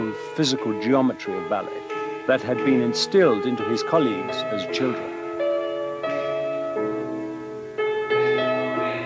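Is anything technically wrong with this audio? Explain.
No, there is nothing technically wrong with this audio. It has passed through a call's microphone processing, which leaves nothing above 8 kHz and trims the lowest bass as it normally does.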